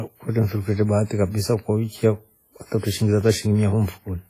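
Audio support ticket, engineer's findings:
Speech ringing and washy throughout, hiss breathing with level, nothing above 14.6 kHz. Likely WMA compression, heavy damage fitting about 24 kbps: long transform blocks smear quantisation noise over tens of milliseconds, weak spectral lines zeroed out.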